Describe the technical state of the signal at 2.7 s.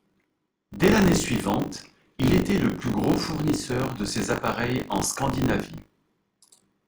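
At 2.7 s the speech carries a steady robotic 50 Hz buzz, part of buffer tearing that runs the whole clip. Writer and hardware have slipped, so about a fifth of each buffer replays audio roughly 40 ms old.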